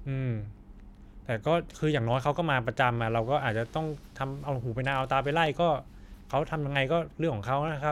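A speech clip with regular clicks from about 1.03 to 7.68 s, every 1.11 s, roughly seven times. These are likely clock drift buffer slips, with mismatched device clocks dropping or repeating a few samples each time.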